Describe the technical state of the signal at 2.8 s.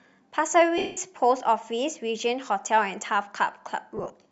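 At 2.8 s the speech comes through intact, with no fault at that moment; the light grain at the top of the band is simply what the Bluetooth LC3 link that likely carried it leaves behind.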